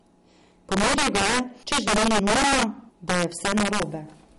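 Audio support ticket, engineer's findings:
Integer overflow, whole clip: harsh cracks on loud speech peaks. Gain runs about 7 dB hot, so a small share of samples wrap to the opposite sign instead of being limited. Check the gain stage for saturation.

MP3 compression, likely cause, throughout: watery, swirly speech, smeared attacks, nothing above 11.2 kHz. Encoder starving for bits, which fits a low rate around 48 kbps.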